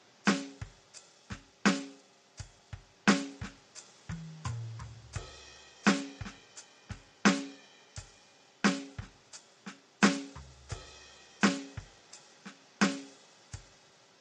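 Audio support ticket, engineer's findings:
Music sounds rough and grainy throughout, noise filling gaps between harmonics, top end thin and synthetic. Likely low-delay AAC compression (AAC-ELD), at a rate that fits roughly 32 kbps: short frames blur harmonic detail, too few bits left for clean treble.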